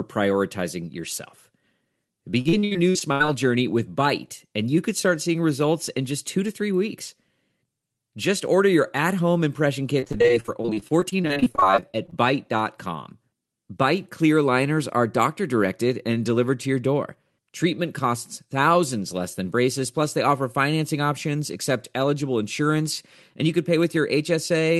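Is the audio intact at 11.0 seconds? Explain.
No. Repeated packet loss with a robotic sound runs from 10.0 to 12.14 s, just after "your at home impression." Over that stretch, dozens of short gaps follow one another, the longest about 38 ms. Each hole is filled by stretching the last bit of sound, so about 0.6 s in total is patched, roughly 28 percent of the span. The result is choppy, robotic audio with pieces missing, heard through the call codec's 12 kHz band limit.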